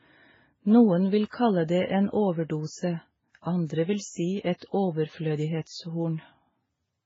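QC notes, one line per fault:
Throughout: transcoding between lossy codecs. The speech was likely encoded at a very low bitrate, MP3 at around 16 kbit/s, then re-encoded as Vorbis at a similarly low rate. The second encoder wastes its few bits copying the first one's artefacts, then adds its own on top, so two kinds of damage sit together. Nothing is heard above 7.6 kHz.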